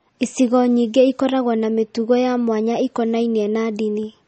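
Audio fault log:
Throughout, MP3 compression: the speech has a watery, swirling texture, and nothing survives above about 8.4 kHz, so the top of the sound is dull and s sounds come out smeared with metallic chirps. This is likely low-bitrate MP3 encoding, consistent with roughly 32 kbps: short of bits, the encoder cuts the treble at a fixed point and drops weak frequency lines, which flicker on and off between frames.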